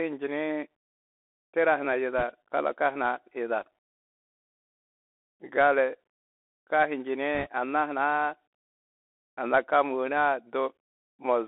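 Throughout the speech, the Bluetooth CVSD headset codec confines everything to about 300 Hz to 3.5 kHz. Its one-bit up-or-down coding, which fits a 64 kbps CVSD stream, leaves granular hiss and scratchy s sounds, which sets it apart from clean telephone band-limiting.

From 2.18 to 2.23 s, between "tira huna" and "kalaka huna", and again from 7.35 to 7.47 s, bit errors on a Bluetooth voice link add brief rushing crackle. Each flipped bit carries little weight and fades quickly, so there are no sharp clicks or silent dropouts.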